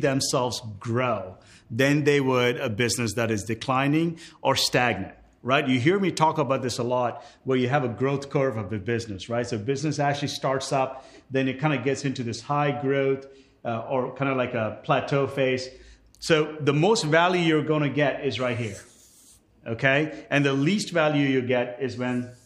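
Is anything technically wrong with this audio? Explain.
No, nothing technically wrong turns up anywhere in this recording.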